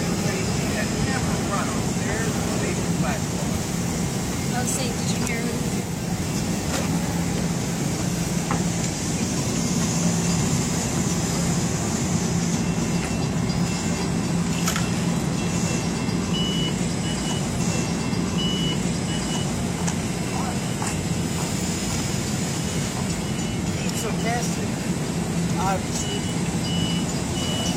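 A stream segment repeated fault occurs at 17.56 s: about 2.04 s of audio plays a second time through 19.60 s, as the player queued the same segment twice. A spectrogram shows an identical block of patterning recurring, with a thin vertical discontinuity at the jump back.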